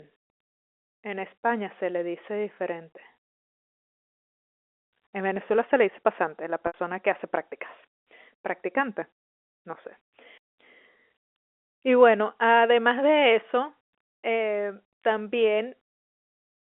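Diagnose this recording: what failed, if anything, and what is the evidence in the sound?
The network stage failed briefly: packet loss with pitch repetition from 6.67 to 6.74 s, between "le dice pasante la" and "que hace prácticas". The concealer repeats the last pitch period across the 70 ms gap, giving a buzzy held sound that fades before speech cross-fades back.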